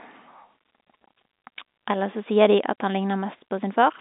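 No technical faults are audible.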